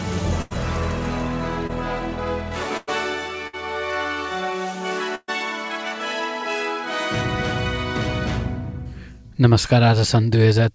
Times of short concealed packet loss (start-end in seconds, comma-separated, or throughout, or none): 1.67-1.71